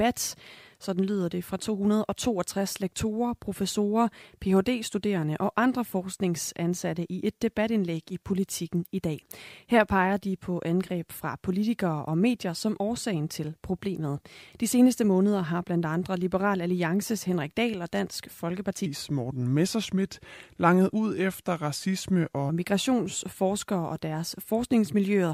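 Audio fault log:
18.86–22.49 s: section at the wrong speed. The speech runs at 0.854x, so it drops about three semitones and drags. The likely cause is a mismatched playback clock.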